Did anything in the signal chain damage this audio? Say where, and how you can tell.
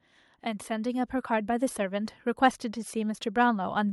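Yes. The speech and its background swell up together from 0.05 to 2.2 s, by about 6 dB, then again from 2.93 s to the end, by about 4 dB. That is automatic gain rising in call processing, where the gain control judged the input too quiet and slowly raised it.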